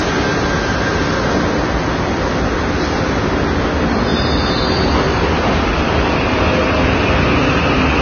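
Throughout the audio, nothing reaches above 6.5 kHz, and several kinds of coding artefact are heard stacked together. This is likely transcoding between lossy codecs: successive low-bitrate encodes, ending in MP3, each layering their own artefacts onto what the earlier ones left.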